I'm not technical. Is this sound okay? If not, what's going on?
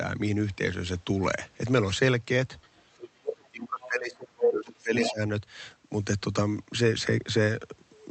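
No, it isn't quite right. The first problem is the other side's voice leaking through. A second voice can be heard from 2.62 to 3.09 s, then in short scraps at 3.44–3.48, 3.81–3.87, 4.40–4.48, 4.74–4.82 and 4.99–5.14 s. Most are faint, but the one at 4.40 s is slightly louder than the main talker and the one at 4.99 s is nearly as loud. The likely cause is that the talker's device played the caller on a loudspeaker and the echo canceller failed to clean it out of the microphone.

The second problem is speech suppressed in double talk. Between 3.21 and 5.21 s the main voice repeatedly drops away, at its worst almost to silence, for about a second and a half in total. This likely happened because both people spoke at once and the echo canceller, unable to tell them apart, turned everything down together.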